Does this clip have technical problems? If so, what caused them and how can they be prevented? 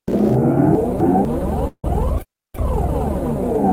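Yes. Between 0.75 and 1.25 s the sound jumps and jumbles: chunks out of order, a 250 ms block arriving one chunk late and playing after its successor, leaving hard joins but no loss. Sequence-numbered buffering before playback prevents this.

At 1.67 s a buzz fades to about 70 ms of silence, resuming at 1.85 s with nothing missing: a call audio freeze, likely from delayed packets draining the jitter buffer, adding 162 ms delay. An adaptive jitter buffer prevents it.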